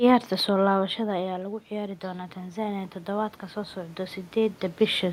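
Speech in which, from 0.72 s to 4.27 s, the voice and the room noise behind it swell up together over several seconds. That slow joint rise is automatic gain rising. Around half a second in, the talker moves and the level reaching the microphone drops by about 12 dB. The automatic gain control responds by gradually raising its gain by about 7 dB, lifting the background along with the voice.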